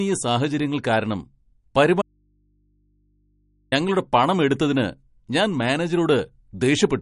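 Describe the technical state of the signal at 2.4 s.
At 2.4 s the signal is inside an audio dropout to a faint residue, running from 2.02 to 3.72 s (1.7 s). The speech cuts out abruptly and the gap holds only mains hum, roughly 45 dB below the signal, likely from an open input that stayed live after the break.

MP3 compression damage is also present at this point. Nothing is heard above 10.6 kHz, and the plainly audible watery, smeared quality likely comes from an encoder starved of bits, which fits a low bitrate around 40 kbps.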